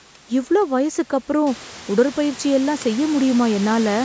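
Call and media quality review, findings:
No faults found in this speech clip. Room noise steps up by about 12 dB at around one and a half seconds but stays about 19 dB below the speech, and the call microphone processing leaves nothing above 8 kHz.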